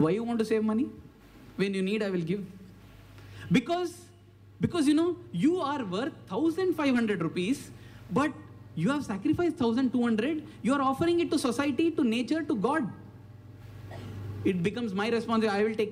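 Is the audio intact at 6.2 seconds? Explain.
No. Mains hum is present at 6.2 seconds, running from 4.98 s to the end of the clip. Power-line energy is leaking into the signal path, most plausibly through a ground loop or a transformer sitting close to the cabling, and it adds a steady 60 Hz tone with a few low harmonics stacked above it. It sits roughly 25 dB below the wanted sound, quiet but continuous, a low drone that never varies while the audio moves over it.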